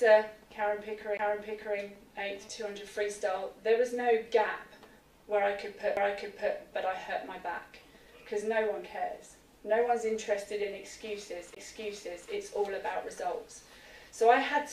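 The audio has three CD skips, at 1.17, 5.97 and 11.55 s. Each time the laser jumps tracks, causing a tick, a brief mute (roughly 20 ms, just a few milliseconds at 5.97 s) and an abrupt jump in position. A spectrogram shows a thin vertical broadband stripe; the waveform shows a near-flat gap and a mismatched join.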